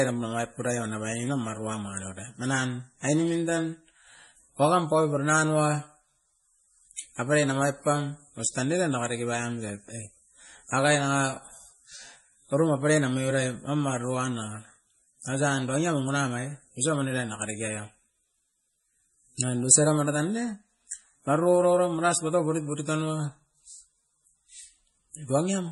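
Speech throughout with heavy MP3 compression damage: nothing above 11.4 kHz, plus a watery, swirly texture that fits a low bitrate around 32 kbps, likely from starving the encoder of bits.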